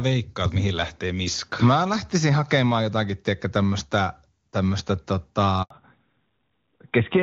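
At 5.62 s the call was switched between networks and no speech frames arrived for 80 ms, a handover gap: the speech collapses to silence within a few tens of milliseconds and stays silent until 5.70 s, so whatever was said in that stretch is simply gone. When sound resumes at 5.70 s, the call has not returned to HD Voice but fallen back to narrowband, which fits a switch from AMR-WB near its top rate to AMR-NB at about 12.2 kbit/s. Nothing above 4 kHz survives through to the end, so the speech loses its airy top and turns duller and rougher than the clear wideband sound before the break.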